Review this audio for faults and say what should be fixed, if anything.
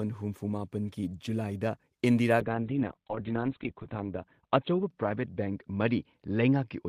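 Call bitrate drop from 2.41 s to the end of the clip: the speech turns coarse and muffled as the call's bandwidth estimate falls and the encoder is forced onto far fewer bits. The audio band narrows from full range to about 4 kHz, and the roughest stretch lasts 1.45 s. The sound fits a fall from around 32 kbps to about 9 kbps. To prevent it, smooth the bandwidth estimator's reaction to short dips and hold a higher minimum bitrate for speech.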